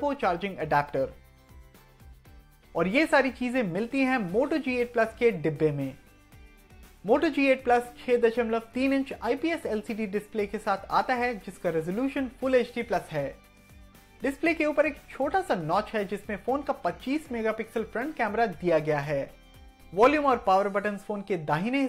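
No technical faults can be heard anywhere in it.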